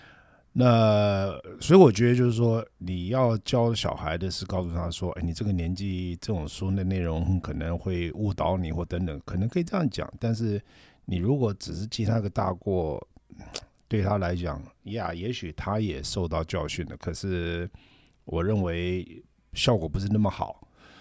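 Speech, with nothing technically wrong with it.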